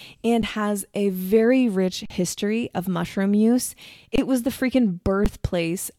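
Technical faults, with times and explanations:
0.42 s, 2.06–2.10 s, 4.16–4.18 s, 5.25 s: underrun with held sample. The sound freezes 12–46 ms (flat waveform; blank spectrogram column), then resumes as about 10–50 ms of audio is skipped.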